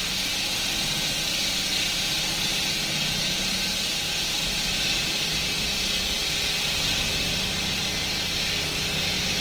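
From start to finish the audio has a grainy, rough texture, with tonal parts turning noisy rather than swirling, while content still reaches about 20.2 kHz. This is likely Opus compression in CELT music mode, filling starved bands with noise, consistent with roughly 16 kbps.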